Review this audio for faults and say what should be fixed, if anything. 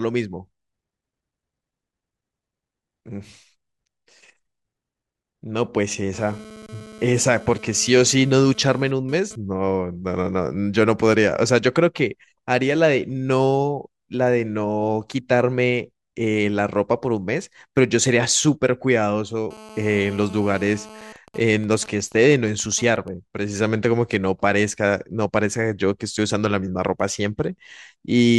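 GSM phone buzz appears twice. From 6.13 to 9.36 s, a hard, raspy buzz sits about 21 dB below the speech and comes and goes, as a phone moving data does. From 19.51 to 21.13 s it returns steady, as during a call. Both run at 217 Hz with many harmonics. A nearby 2G phone transmits in bursts, and the audio circuitry rectifies the radio pulses into sound unrelated to the speech.

GSM signalling bursts follow from 21.16 to 23.08 s, at roughly 20 dB below the speech. The buzz breaks into even ticks with a longer buzz twice a second. The same phone, still in its call while its user is silent, now sends only short groups of radio bursts. The audio circuitry rectifies each group into a click or brief buzz.

Keep phones away from microphones, cables and preamps, or switch them to flight mode during recording.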